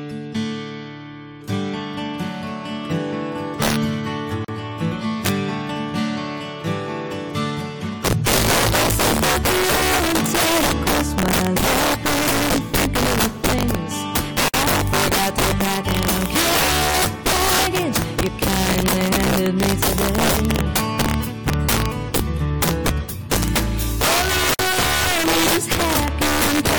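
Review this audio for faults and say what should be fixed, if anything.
Integer overflow runs through the whole clip. The loudest peaks crack violently instead of flattening. The signal is pushed about 8 dB past full scale, so a few percent of samples exceed the integer limit. Each of those wraps to the opposite extreme of the range. That produces sharp, harsh cracks, far worse than ordinary clipping. To prevent it, use saturating arithmetic or a limiter before conversion, and reduce the gain by at least 8 dB.

There is a gap at a join of encoded pieces every 10 seconds. The first is at 4.45 to 4.48 s, lasting 38 ms. The second is at 14.48 to 14.54 s, lasting 54 ms. The third is at 24.54 to 24.59 s, also 54 ms. Each is a short silence with smeared edges. The sound then resumes where it left off. This points to pieces that were encoded separately and joined with the encoder's start delay and end padding left in. 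To prevent it, trim each piece's encoder delay and padding before joining, or encode the audio as one continuous stream.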